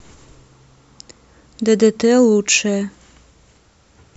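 No technical faults are audible.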